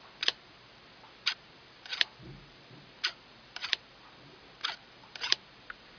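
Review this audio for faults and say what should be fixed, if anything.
Nothing stood out on listening, so there is nothing here that needs fixing.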